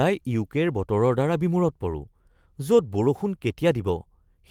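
Just a short bit of speech, and nothing in it sounds technically wrong at any point.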